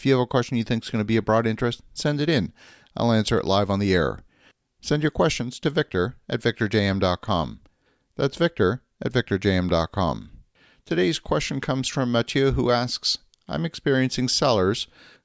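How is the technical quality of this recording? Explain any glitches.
Nothing in this recording jumps out as a glitch, so there's really nothing to explain here.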